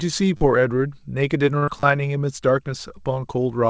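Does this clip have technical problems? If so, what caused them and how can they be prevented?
Yes. Repeated buffer, 0.37 to 0.41 s and 1.80 to 1.83 s: new audio arrived late, so the device replayed its last short block, which fits a 10 ms buffer, giving a buzzy stutter. Use larger output buffers and keep the audio thread free of competing work.

Short stall from a late packet, 1.58 to 1.64 s: the jitter buffer ran dry, so the receiver stretched the last sound for 41 ms until the packet arrived. Nothing was skipped, but the sound hangs too long. A slightly deeper adaptive jitter buffer would absorb this delay change.

Short concealed packet loss, 1.64 to 1.69 s: 40 ms of audio never arrived, so the receiver extrapolated the preceding sound and blended back, leaving a brief smear. Forward error correction or redundancy on the connection would reduce such gaps.

The G.722 call path carries nothing above 8 kHz, as that codec is designed to do.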